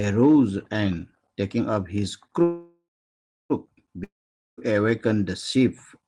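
At 2.43 s the speech stops and the last sound is stretched into a fading buzz, which gives way to about 0.63 s of near silence before the audio resumes at 3.52 s. This is a call audio freeze, likely caused by packets held up in transit until the jitter buffer emptied. The pause lasts about 1.07 s, yet when speech returns it continues from exactly where it halted. Nothing is lost, and everything afterwards simply runs about 1.07 s late.

A second break begins at 4.04 s and ends at 4.73 s: again a fading continuation of the last sound, then about 0.47 s of near silence. This one is a long network dropout, likely caused by packets that never reached the receiver. Unlike the freeze, the speech does not pick up where it stopped. It jumps ahead when it returns, with about 0.54 s of the original audio gone.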